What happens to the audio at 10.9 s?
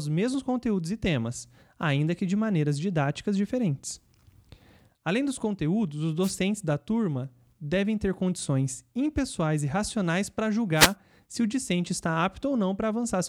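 Right there you've got a wireless microphone noise hit, running from about 10.75 to 10.95 s. The FM radio link briefly fades as reflected signals cancel, so receiver noise surges up and you get a quick swish of static over the speech for roughly 0.2 s.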